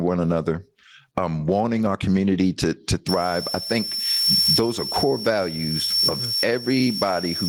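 From the start, the speech shows gain pumping, with the level swinging around 20 dB. The likely cause is input gain set far too high, with a fast limiter clamping each peak. Unlike a noise gate, the background never drops out.

At 3.09 s a switching supply whistle enters and runs to the end at 7.48 s. It is a thin tone near 5.4 kHz, wandering between 5.39 and 5.48 kHz, sitting roughly ten decibels below the speech. A supply in audible burst mode drifts with load like this, whereas steady electrical hum holds a fixed low pitch.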